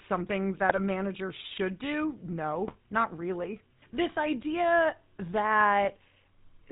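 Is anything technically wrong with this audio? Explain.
Yes. The speech carries two faults.

GSM full-rate codec, throughout: buzzy, gravelly roughness with nothing above 4 kHz, which fits 13 kbps coding that models the voice with pulse-driven excitation.

GSM bit errors, at 0.69–0.79 s, just before "manager should do", and 2.68–2.77 s, between "manager should do" and "not really": corrupted filter, pitch and gain values break the voice into squawks and gargling.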